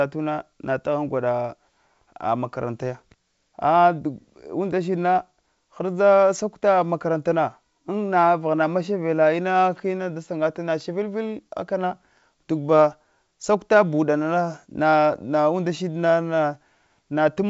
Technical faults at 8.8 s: none

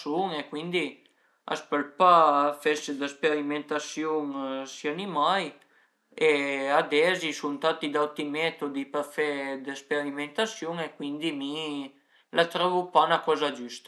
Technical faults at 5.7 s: none

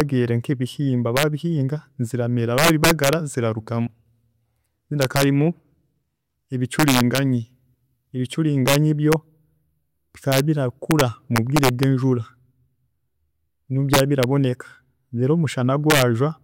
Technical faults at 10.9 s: integer overflow

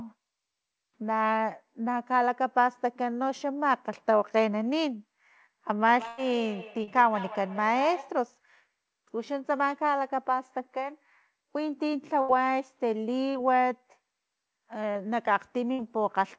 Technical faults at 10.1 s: none

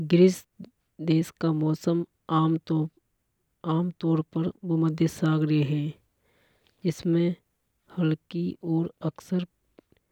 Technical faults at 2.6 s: none

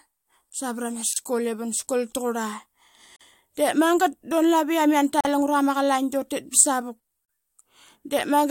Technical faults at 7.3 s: gap at a join of encoded pieces

